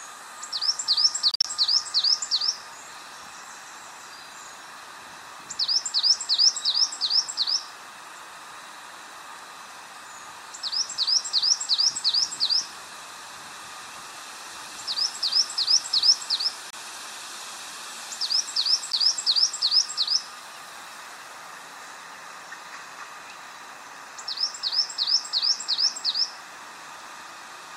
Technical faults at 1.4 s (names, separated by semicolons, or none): Bluetooth dropout